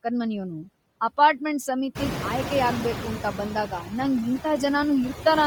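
Throughout the speech, the background between words sinks and swells, the mark of noise suppressor artifacts pulling steady noise down by about 14 dB, frame by frame.

A breathy, grainy edge also clings to the voice throughout, most likely from heavy Bluetooth LC3 compression at a low bitrate, consistent with roughly 32 kbps in 10 ms frames.

Around 2.0 s, the room noise jumps by about 19 dB. From 1.95 to 3.44 s it comes through louder, at first cut by only about 5 dB, then settles as the noise suppressor catches up over 1.49 s.

From 3.69 to 3.92 s, part of the speech sounds swallowed and faint, dipping by up to about 9 dB for roughly a tenth of a second in total. This is speech cut by the noise suppressor, which mistook it for background.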